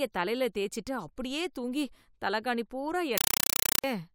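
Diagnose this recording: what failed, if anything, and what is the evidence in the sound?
At 3.18 s, just after "அப்படியே தூங்கி தலைகாணி பூரா", the speech turns into loud chattering static until 3.84 s. That's a compressed stream played as audio at the playback link: undecoded data read as samples, giving 5.33 ms noise bursts 31.25 times a second, which fits AC-3.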